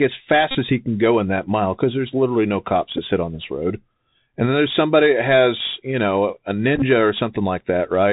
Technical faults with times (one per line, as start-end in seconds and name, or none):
0.00-8.12 Bluetooth CVSD headset codec
0.51-0.57 Bluetooth headset packet repeated
2.97-2.99 Bluetooth headset packet repeated
6.76-6.83 Bluetooth headset packet repeated